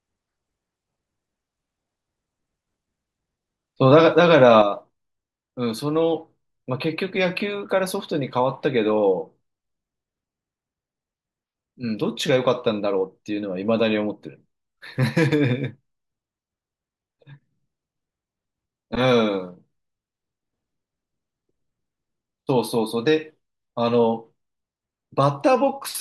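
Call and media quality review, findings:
Speech level steps down about 6 dB at 4.62 s and stays down to the end; likely one channel drops out before mono sum. Abrupt step, no fade or pumping, unlike gain riding.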